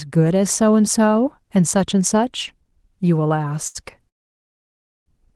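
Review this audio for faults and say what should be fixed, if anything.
Short stall from a late packet, 3.67 to 3.86 s: a packet arrived late, the jitter buffer ran dry, and the receiver held the last sound for about 75 ms before resuming at the same point. Nothing is lost, but a sound is audibly stretched, and playback runs 75 ms later than before. The Opus coding, whose top end stops near 12 kHz, fits a 20 kbps call stream. A jitter buffer that adapts its target depth to measured packet arrival variation would absorb this delay.

Call audio freeze, 4.09 to 5.08 s: the sound stops and about 960 ms of near silence follows before it picks up again where it left off. The likely cause is that packets were held up in transit long enough for the jitter buffer to empty completely. The receiver filled the wait briefly and then went quiet, inserting a gap of almost a second rather than dropping any audio. 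Fixing the network stall upstream, or prioritising the call's packets with QoS marking, would prevent it.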